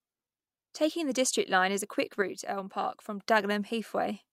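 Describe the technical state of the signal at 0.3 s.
At 0.3 s the speech signal is intact, with no audible fault at that point.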